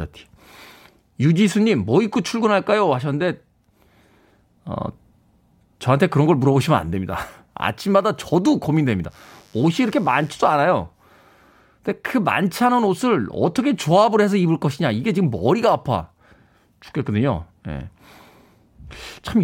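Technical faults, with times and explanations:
9.09–10.59 s, mains buzz: a steady, raspy buzz sits under the speech for a second and a half, well below it, about 35 dB down. Switching spikes leak in twice per 50 Hz cycle. Their harmonics stretch up into the kilohertz range, giving the rasp.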